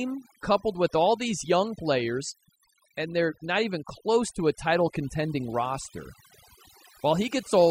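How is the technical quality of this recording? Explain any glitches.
The recording suffers from overdone noise removal throughout. A noise reducer set far too strongly cuts whole frequency bands near its noise estimate, leaving lowered backgrounds with twinkling specks and taking quiet parts of the voice with them.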